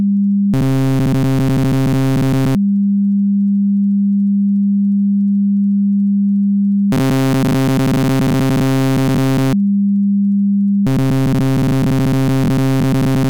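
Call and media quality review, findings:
Robotic sound from repeated short buffers at 0.54–2.56 s (throughout), 6.92–9.53 s and 10.87–13.30 s (most of each span): sound becomes a rigid metallic buzz at 133 Hz. Likely playout underrun looping a 7.5 ms chunk. Spectrogram shows a 133 Hz harmonic comb, and the waveform shows identical repeating cycles.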